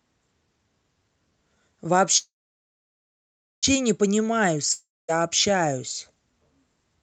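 Speech carried over a call link whose sound stops above about 8 kHz, which fits an Opus connection at around 32 kbps. At 2.17 s it freezes: the last sound trails off as a fading buzz, then about 1.35 s of silence follows until 3.65 s. Speech resumes exactly where it stopped, nothing skipped. This is a call audio freeze, likely from packets held up in transit draining the jitter buffer, which adds a 1.45 s delay to everything after it. From 4.73 s to 5.10 s a shorter break sounds different: a brief fading hiss, about 0.23 s of silence, then speech returns further along with roughly 0.36 s of it gone. That points to a long network dropout, likely packets lost outright rather than delayed, so the receiver filled the gap and skipped ahead.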